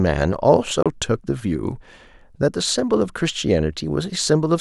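Bluetooth dropout at 0.83 to 0.86 s: the speech cuts to silence for about 29 ms, then carries on further along as though it had kept playing underneath. The likely cause is that audio packets missed their delivery deadline over the wireless link and were discarded, leaving the headphones nothing to play until good data arrived. A gap this short fits the loss of a couple of packets.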